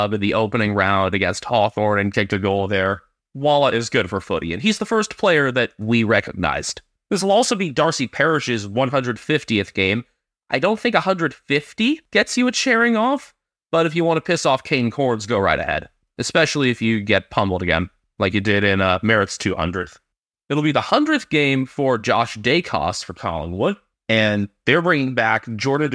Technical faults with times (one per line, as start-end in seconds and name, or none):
none